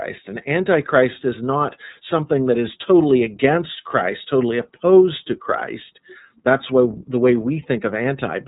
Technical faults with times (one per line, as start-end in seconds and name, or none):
0.00-8.47 iLBC codec